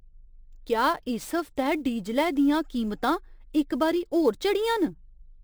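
From start to finish the speech carries sample clock jitter: the converter's clock wanders by something like 10 microseconds, so each sample lands slightly off its intended instant. The resulting error scales with how steeply the waveform is changing, sitting roughly 25 dB under the signal. It comes across as a grainy hiss riding on the speech, strongest on loud passages and sibilant, high-frequency sounds, and disappearing in the pauses.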